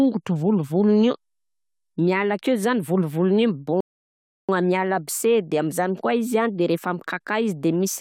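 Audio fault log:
3.81–4.49 s, rebuffering stall: the speech drops abruptly into silence for about 0.68 s, then picks up again at exactly the point where it broke off, with nothing skipped or repeated. This happens because the player used up all the audio it had downloaded and had to pause until more data arrived. Because it waits rather than jumping ahead, no sound is lost. The gap simply lengthens the clip by that 0.68 s.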